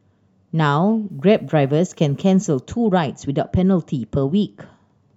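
From 1.10 to 2.60 s, the speech turns grainy. This is likely low bit depth without dither. The level steps are coarse, which fits about 10-bit rounding. The error tracks the voice, sitting roughly 50 dB below it, so quiet parts sound gritty.

At 4.16 s, compressed frames are skipped. Roughly a twentieth of a second of audio is missing, and the speech jumps ahead.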